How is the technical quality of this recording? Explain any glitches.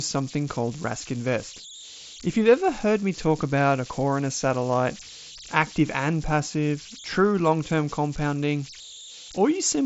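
The recording has one clear fault, converter idle tones, running through the whole clip. They sit at about 18 dB below the speech. The tone lands somewhere around 4 kHz. The converter appears to have run without dither. With small inputs, a delta-sigma converter falls into repeating bit patterns, and those patterns produce tones set by the input's offset. Here that gives a high whistle in the pauses and a grainy hiss under the speech. The band ends near 7.7 kHz, as the mSBC headset link allows.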